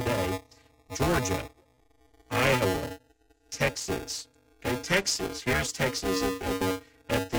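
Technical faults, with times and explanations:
Throughout: buffer tearing, a steady 375 Hz robotic buzz that fits a 128-sample buffer, as roughly two-fifths of each period replays audio a few milliseconds old.
6.60 s: damaged data in a compressed stream, a brief chirp, squawk, click or short hole where corrupted frames made the decoder lose sync and hunt for the next frame header.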